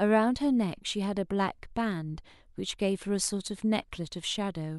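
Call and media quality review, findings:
No faults found in this speech clip. No working path is listed to comment on beyond that.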